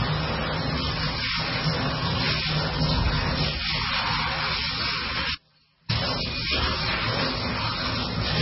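MP3 compression runs through the whole of this recording of sounds: nothing survives above 5.6 kHz, and weak detail flickers in and out with a watery, swirly quality and smeared attacks, heavy damage that fits a very low bitrate, likely around 16 kbps. An audio dropout to a faint residue hits from 5.35 to 5.90 s. For about 0.55 s the sound cuts abruptly to a faint trace roughly 40 dB below its normal level, then returns just as suddenly, likely because the signal was lost while the path after it stayed live.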